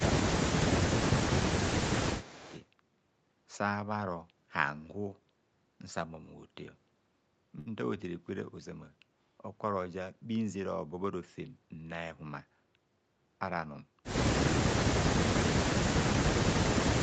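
A speech recording carried over a call, band-limited so that nothing reaches above 8 kHz, carries four kinds of fault. The most frequent is speech suppressed in double talk, likely caused by an echo canceller that could not tell the near talker from loudspeaker echo while both sides spoke and so turned everything down. The speech dips sharply at 0.0 to 0.14 s, 1.01 to 1.12 s and 2.05 to 2.32 s, by roughly 10 to 15 dB, and much harder at 15.62 to 15.75 s and 16.33 to 16.50 s, where the drop approaches 35 to 40 dB and the sound nearly vanishes. Overlapping the third of these, an echo leak shows up from 2.2 to 2.64 s: the echo canceller at a loudspeaker end likely failed to remove all of what its microphone picked up and sent the remainder back. The result is a faint copy of the speech trailing 266 ms behind, about 20 dB below the direct sound. At 7.59 to 7.68 s there is a short stall from a late packet. 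The jitter buffer ran dry, so the receiver stretched the last sound across 67 ms until the packet arrived and then resumed where it left off. Nothing is lost, but one sound is held unnaturally long and adds 67 ms of delay. A jitter buffer speed-up follows from 12.11 to 12.57 s, where the receiver cut about 70 ms out in small pitch-period slices. The speech runs at about 115 % speed with unchanged pitch and sounds briefly hurried.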